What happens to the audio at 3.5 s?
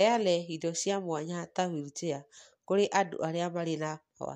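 Nothing goes wrong at 3.5 s; the speech carries on intact through that moment, with no dropout, click or other fault.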